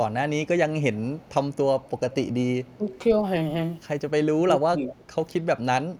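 Echo leak appears at 0.82–0.99, 1.15–1.3, 1.52–1.56, 1.81–2.15 and 2.65–2.99 s. A faint, delayed copy of the speech returns 290 ms late. The likely cause is a far-end loudspeaker whose echo canceller let some pickup through. The copy sits about 20 to 35 dB below the speech. Speech suppressed in double talk follows at 2.77–2.83 s and 4.38–4.92 s. The speech dips by roughly 10 dB, then roughly 15 dB. This likely happens because the canceller turned down its own talker along with the loudspeaker echo. One more echo leak occurs at 4.91–5.05 s.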